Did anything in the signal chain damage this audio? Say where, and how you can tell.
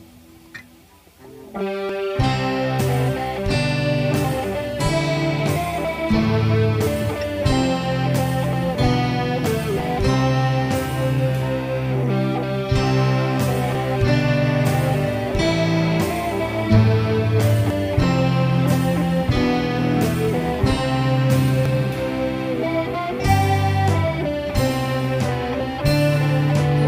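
Yes, there are short skips at 1.89, 9.80, 13.75, 17.70, 21.66 and 25.61 s, each dropping around a twentieth of a second with the two sides butted straight together. Apart from the first, they land almost exactly 3.95 s apart, which fits a recorder or buffer stage working in 4-second chunks. That's most likely audio missing between chunks, a little piece lost each time one block closes and the next one opens.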